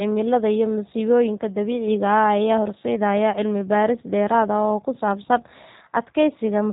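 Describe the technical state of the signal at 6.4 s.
At 6.4 s the speech sounds rough and slightly synthetic, with nothing above 3.8 kHz. This is G.729 codec damage, present throughout the clip and fitting an 8 kbit/s voice codec that rebuilds speech from a vocal tract filter, a pitch predictor and sparse pulses.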